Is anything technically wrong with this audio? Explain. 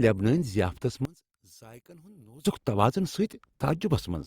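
Yes, there's one problem. From 1.05 to 2.45 s the speech falls about 24 dB to a faint trace, likely one channel inverted, which cancels the shared centre when summed to mono.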